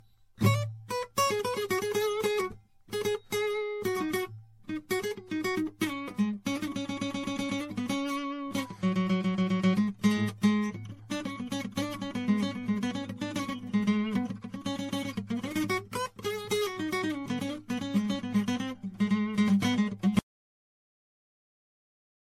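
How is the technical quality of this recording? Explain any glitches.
The music has two clear faults: a worn, smeared lossy sound from start to finish, and a hard cut to silence near the end.

Generation loss runs through the whole piece. It's swirly and hollow, transients are soft and blurred, and nothing comes through above 16.5 kHz. That's likely from the audio being MP3-encoded and decoded around seven times, with the character pointing to something like 64 kbit/s. Each pass re-quantises on a shifted frame grid, so the smearing and spectral holes stack up well beyond what one encode at that rate would give.

The audio dropout to silence starts at 20.19 s and runs to the very end. The music stops mid-flow and leaves silence, with no room tone or noise floor under it, and it never comes back. The likely cause is that the input was lost, through a disconnect, a failed link or a stray mute, while the recorder kept writing silence. 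Whatever was playing in that last stretch is simply gone.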